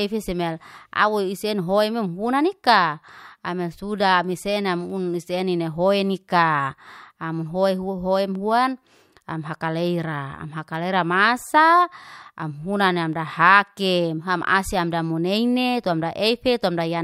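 No technical faults can be heard anywhere in this speech recording.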